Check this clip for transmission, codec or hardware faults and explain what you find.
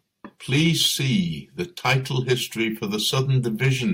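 There's hard clipping in this speech, in three bursts: 0.54 to 1.16 s pushed about 5 dB past the limit, 1.86 to 2.34 s about 6 dB over, just before "for the", and a brief one at 3.64 to 3.73 s about 3 dB over. Something in the chain couldn't pass peaks that big, so it sliced them flat. Those squared-off tops throw harmonics way up the spectrum, which you hear as a gritty, crackly fuzz on the loud stretches.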